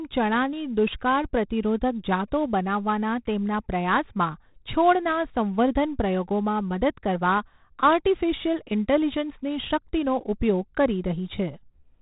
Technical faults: 4-bit ADPCM compression

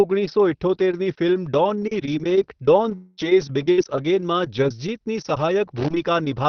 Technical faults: long network dropout; lost packet rebuilt from error correction; burst of packet loss

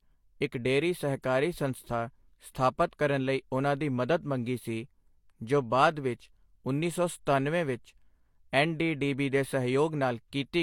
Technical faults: adaptive stream at a lower bitrate

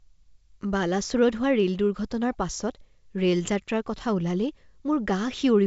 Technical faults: none

